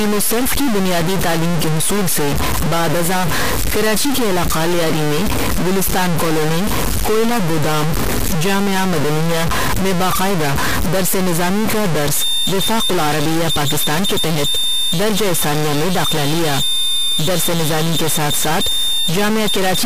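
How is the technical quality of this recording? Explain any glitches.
The recording has two clear technical faults: a distortion running through the whole clip and a high whistle over the final stretch.

From start to finish, the speech carries a gritty distortion, and the pauses fill with a hiss-like crackle instead of falling silent. This points to a stuck bit, likely from a broken data line or converter fault. One bit of every sample is held at a fixed value, so about half the samples are offset by that bit's weight. Ordinary clipping only roughens loud peaks, but this damage is still present in the gaps, because the correct value of that bit changes with the sign of small values.

From 12.08 s to the end, a thin, steady tone near 3.6 kHz sits behind the speech, roughly 20 dB below it, swelling and fading slowly in level. This is a feedback whistle, most likely from a loudspeaker-to-microphone loop poised just at the feedback threshold. 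Runaway feedback would grow into a howl, but this one rings at a single pitch without building up. Its slow swells in level also set it apart from a clean, constant electrical tone.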